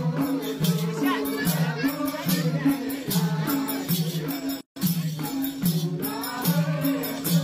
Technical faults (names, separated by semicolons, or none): gap at a join of encoded pieces